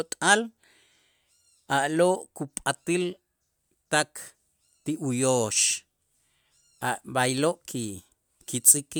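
No technical faults can be heard anywhere in the speech.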